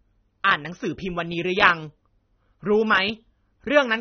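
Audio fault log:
Throughout: AAC compression. The speech has likely passed through an AAC-LC encoder at a low bitrate, with damage consistent with roughly 27 kbps. With so few bits, the encoder discards everything above 6.3 kHz and quantises the remaining frequency lines coarsely. The result is plainly audible: the speech sounds dull and muffled, sibilants lose their crispness and turn fizzy, and sustained sounds take on a smeared, warbling texture.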